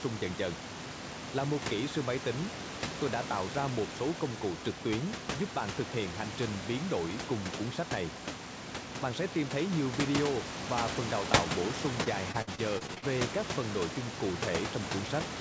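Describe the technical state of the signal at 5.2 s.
At 5.2 s the signal is intact, with no fault present at that moment.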